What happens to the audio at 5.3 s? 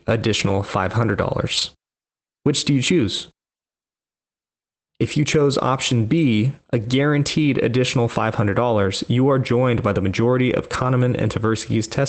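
Nothing goes wrong at 5.3 s; the speech passes through intact, with only the steady sound of the call path, its top end limited to about 8 kHz, continuing as before.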